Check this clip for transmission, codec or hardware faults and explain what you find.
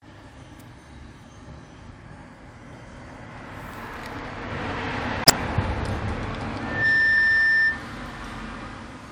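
Two kinds of fault are present: corrupt frames decoded twice, and a feedback squeal.

Corrupt frame decoded, 5.23 to 5.30 s and 7.18 s: damaged compressed frames were played anyway, giving short blips, the first loud and the second fainter. On the spectrogram they appear as brief vertical smears of misplaced energy; the first shows as a sharp spike in the waveform.

Loudspeaker feedback squeal, 6.60 to 7.85 s: the microphone and loudspeaker loop at 1.8 kHz swells over about a third of a second into a squeal well above the audio. A spectrogram shows a bright horizontal line at 1.8 kHz.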